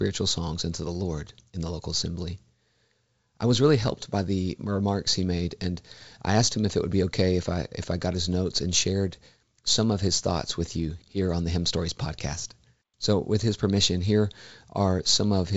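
No technical faults can be heard in this speech.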